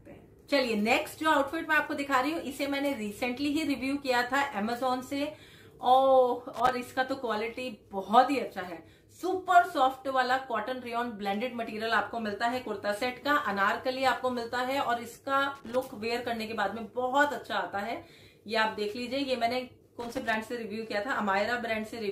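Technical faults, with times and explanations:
6.54–6.72 s, 15.55–15.81 s and 19.99–20.35 s, loose connector crackle: short irregular bursts of scratchy crackle, each a fraction of a second long, as a worn or dirty contact makes and breaks rapidly, chopping the signal and adding pops from any DC on the line.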